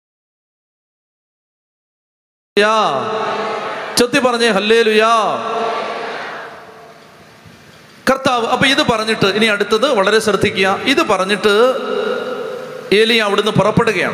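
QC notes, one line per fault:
0.00–2.57 s, audio dropout to silence: the clip opens in dead silence with no room tone, already under way from the first sample, then sound arrives abruptly. The likely cause is a lost input while recording continued. The waveform shows a flat line, and the spectrogram is blank.
Throughout, gain pumping: loud and soft parts sit close in level and the sound is squashed, with the level swinging by around 20 dB. This is likely excessive input gain clamped by a fast limiter. The waveform envelope looks flattened.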